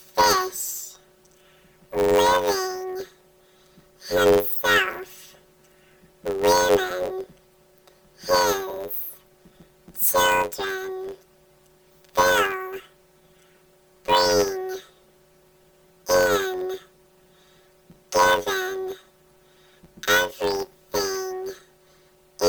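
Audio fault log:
Throughout: planar audio read as interleaved. The sound carries a robotic buzz at about 94 Hz, with no clear octave jump. Each block stores all left samples and then all right samples, but it is read as alternating left-right pairs, so every block plays twice at double speed, first left then right. Because the blocks last only about 10.67 ms, which fits a 512-sample buffer, that repetition becomes a rapid buzz at the block rate.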